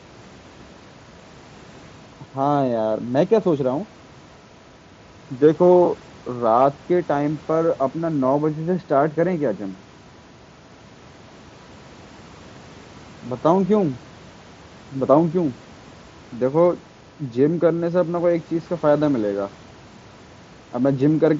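No technical faults can be heard anywhere in the recording.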